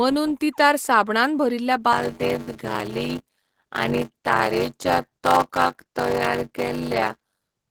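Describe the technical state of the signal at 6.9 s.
At 6.9 s a block size mismatch (padded) is in effect, running from 1.92 s to the end. One stage hands over shorter blocks than the next reads, and zeros fill the shortfall, which fits 512-sample reads. Each block carries a gap, producing a buzz near 94 Hz, and the speech runs at 0.625 times normal speed with pitch roughly unchanged.

Throughout, Opus voice compression is coding the speech in hybrid mode at a low rate, around 16 kbps. Coarse excitation coding leaves the voice plainly muffled, hoarse and faintly robotic, though the band itself stays wide, reaching about 20 kHz.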